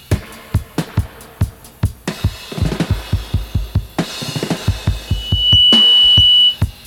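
A loudspeaker feedback squeal appears from 5.07 to 6.60 s: a 3 kHz tone swells over about half a second to roughly 10 dB above the sound, as the microphone-speaker loop exceeds unity gain.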